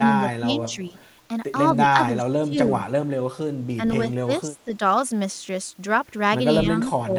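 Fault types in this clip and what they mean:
Speech suppressed in double talk: the voice sinks or breaks up in bursts at 0 to 0.6, 0.76 to 0.95, 1.93 to 2.69, 3.77 to 3.81, 4.24 to 4.8 and 6.63 to 7.12 s. It drops about 10 dB, reaching about 20 dB near 2 s. The likely cause is an echo canceller that couldn't separate its talker from far-end sound and turned both down. The waveform envelope shows abrupt notches, and the spectrogram shows thinned harmonics and faded upper bands.
Echo leak: a faint delayed copy of the voice, 250 ms behind and about 35 dB below the original, surfaces briefly between 0.97 and 1.06 s. This likely comes from a loudspeaker side whose echo canceller left part of its microphone pickup in place and sent it back. On a spectrogram it appears as a weak repeat of earlier harmonic traces.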